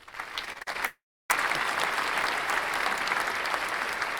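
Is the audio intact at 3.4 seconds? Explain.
Yes, at 3.4 seconds the sound is intact, with no dropout, click, distortion or other fault at that moment.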